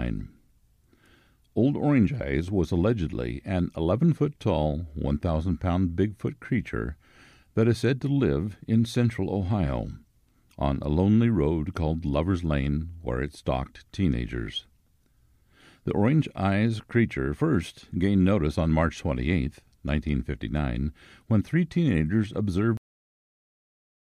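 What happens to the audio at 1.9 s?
Nothing goes wrong at 1.9 s; the speech there is intact, with no dropout, click, distortion or other fault.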